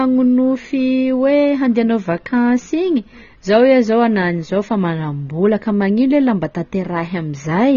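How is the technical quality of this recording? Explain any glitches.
The recording has plainly audible codec damage that runs its whole length. AAC compression, throughout: nothing reaches above 6.9 kHz, and the speech sounds dull and smeared. The likely cause is an AAC-LC encode at a low bitrate, with a texture that fits something around 24 kbps. At that rate the encoder lowers its cut-off to save bits and quantises the remaining frequency bands coarsely. The missing top end takes the air out of sibilants, and the coarse quantising leaves a warbling, fizzy grain on sustained sounds.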